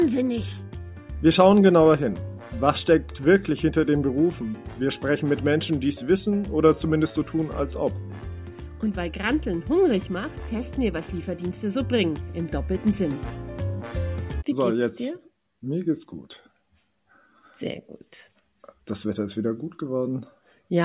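No technical faults can be heard anywhere in this clip.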